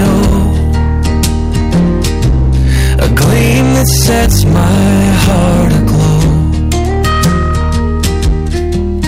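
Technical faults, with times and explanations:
Throughout, hard clipping: the signal reaches the converter or fixed-point stage about 12 dB hotter than it can represent, so every peak beyond full scale is sliced off flat, and roughly a third of the samples sit pinned at the limit. Those squared-off tops add a spray of high harmonics well above the original content, so each loud passage comes out as a harsh, buzzing fuzz rather than crackle on occasional peaks.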